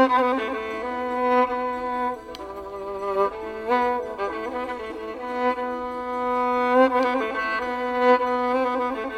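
Listening through this music, nothing stood out as a technical problem at any point.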